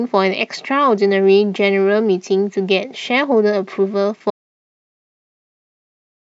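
At 4.30 s the speech cuts to an audio dropout to silence lasting to the end, silence with no room tone, unlike a fade or gate; likely a lost input.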